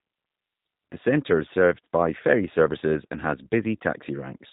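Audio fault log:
Throughout: G.729 codec. The speech is rebuilt from a vocal tract filter, a pitch predictor and a few pulses per 10 ms frame. The result is intelligible but plainly rough and synthetic, with a buzzy, slightly metallic edge, which fits a narrowband speech codec running at about 8 kbit/s. On a spectrogram all energy stops at a flat ceiling near 4 kHz with empty space above, and harmonics look smeared between frames.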